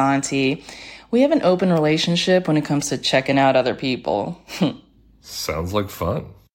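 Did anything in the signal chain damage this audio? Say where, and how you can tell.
No, nothing along the chain has left an audible mark on this speech recording, and the signal arrives intact from the capture end through to playback.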